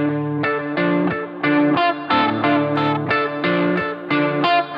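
From 2.76 s to the end, the audio turns thin, bright and hissy. This is pre-emphasis left on. The treble boost added before recording or transmission was never undone. It matches a 50 µs FM curve, lifting 10 kHz about 10 dB above 1 kHz.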